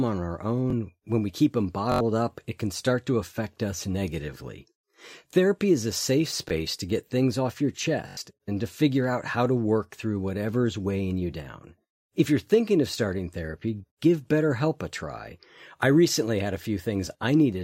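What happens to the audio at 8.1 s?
Repeated buffer, 8.09 to 8.17 s, after "get things off your": late data makes one 21.33 ms block, fitting a 1024-sample buffer, play four extra times as a stutter.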